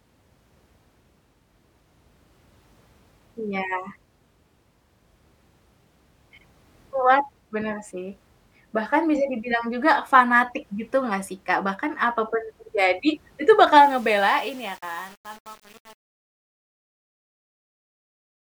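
From 13.8 s, right after "terjadi itu bakal", the speech turns gritty as it fades out: truncation distortion on a fade, consistent with undithered 7-bit resolution.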